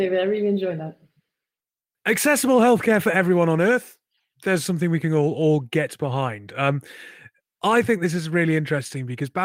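No technical faults are audible.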